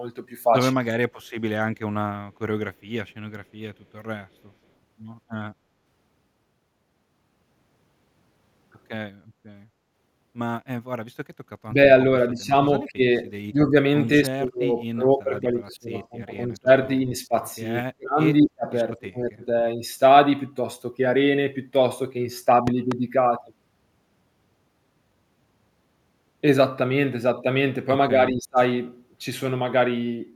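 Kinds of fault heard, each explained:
Speech suppressed in double talk: the voice dips hard or nearly drops out at 11.66–11.78, 12.31–13.75, 14.22–16.69, 17.06–17.34, 17.82–19.47 and 28.1–28.59 s, bottoming out around 40 dB near 18 s. That's likely an echo canceller turning this side down while the far end talked.
Loud pop: two sharp pops hit between 22.67 and 22.94 s, about 10 dB above the speech, which carries on underneath. That's a sudden voltage step or pulse, likely from a plug, switch, static or a driver glitch.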